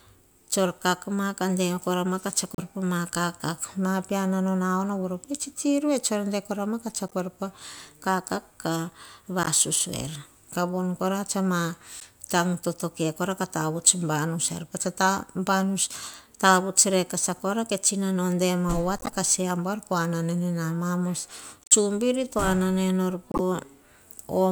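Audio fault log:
2.55–2.62 s, 7.08–7.13 s, 9.43–9.48 s, 12.00–12.05 s, 18.98–19.10 s, 21.64–21.72 s and 23.31–23.40 s: corrupt frame decoded. Each 46 to 114 ms blip spans a few consecutive compressed frames whose bits arrived damaged but were decoded anyway. The misread gains and codes throw energy into the wrong frequencies, so the speech is broken by short squeaks or noise bursts. The one near 7.1 s is faint, and the one near 21.7 s is loud, peaking around -5 dBFS.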